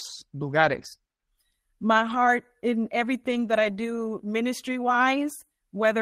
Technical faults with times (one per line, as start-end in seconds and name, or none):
0.57-0.87 lost packet rebuilt from error correction
1.93-2.27 lost packet rebuilt from error correction
3.27-3.69 lost packet rebuilt from error correction